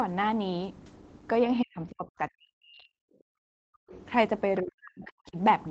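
Speech suppressed in double talk, from 1.61 to 2.99 s: the voice sinks by as much as about 40 dB for roughly a second in total across that stretch. This is likely the echo canceller meeting both sides talking at once. Unable to tell the local talker apart from the loudspeaker echo, it pulls the whole microphone signal down rather than risk passing echo.

Background gated by the echo canceller, from 3.27 to 3.91 s: the room tone is pushed down by about 40 dB for around 0.6 to 0.7 s, leaving an unnaturally dead gap before the ambience snaps back. Here the canceller is clamping the microphone hard while the far end plays through the loudspeaker, then releasing once it judges the echo gone.

The other side's voice leaking through, from 3.91 to 4.0 s: a brief scrap of a second voice sits faintly underneath, roughly 25 dB below the main speech. It most likely comes from loudspeaker output that the canceller failed to remove fully, slipping out just as the gating above lets go.

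Speech suppressed in double talk, again from 4.62 to 5.37 s: the voice drops by up to about 40 dB, with around 0.7 s affected. The same overlap of talkers is the likely trigger. The canceller again treats the near voice as echo to be suppressed. Throughout, the audio carries the 8 kHz ceiling of the Opus call path.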